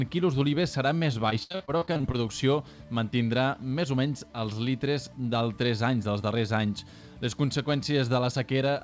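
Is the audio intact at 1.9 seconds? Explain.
No. From 1.30 to 2.16 s, repeated packet loss leaves about a dozen short holes, up to 68 ms, that are patched by stretching the last sound. The result is choppy, with pieces missing. A spectrogram shows repeated frozen, smeared blocks.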